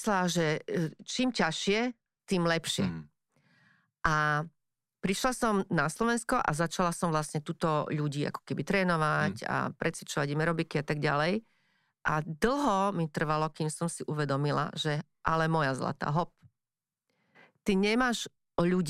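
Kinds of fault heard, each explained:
Channel delay (comb filtering): one channel runs a couple of samples late, roughly 0.04 ms, and summing to mono cancels shared content at regular frequencies. Here the first notch sits up around 10 kHz, so the speech just before "tým lepšie" loses some top-end air and sounds dulled.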